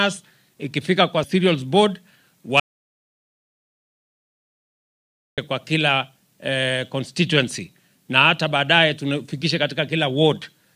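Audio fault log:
2.60–5.38 s, audio dropout to silence: sound cuts out mid-flow for about 2.8 s of silence, no room tone, likely a lost input or link.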